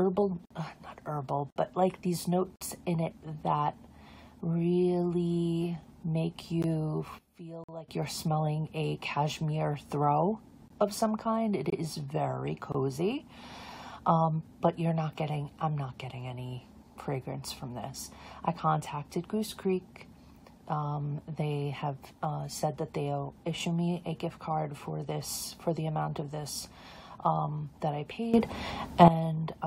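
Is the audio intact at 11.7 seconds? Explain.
No. A gap between stream segments occurs from 11.70 to 11.73 s: two 1-second segments don't quite meet in time, and the player fills the missing 22 ms or so with silence, a brief hard-edged dropout that delays the sound without losing any of it.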